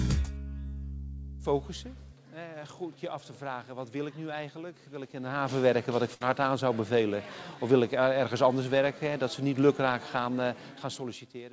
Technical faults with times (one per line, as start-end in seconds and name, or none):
0.64-0.66 short concealed packet loss
6.14-6.21 burst of packet loss
10.54-11.53 zipper noise